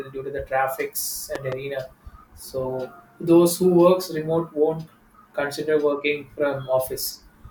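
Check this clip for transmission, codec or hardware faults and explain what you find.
One fault turns up in this speech clip: a loud pop between 1.35 and 1.55 s, just after "to the traffics". A sudden voltage step or pulse, most likely from a plug, a switch, static discharge or a driver glitch, got into the signal, and the stages after it shaped that pulse into two sharp thumps in quick succession. They stand roughly 10 dB above the speech, which carries on underneath.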